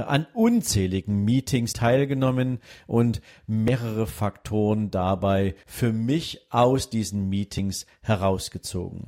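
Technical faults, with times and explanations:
1.73, 3.68, 5.63 and 7.59 s: audio missing between chunks. The speech skips forward about every 2 s, losing around 50 ms butted straight together, likely at chunk handovers.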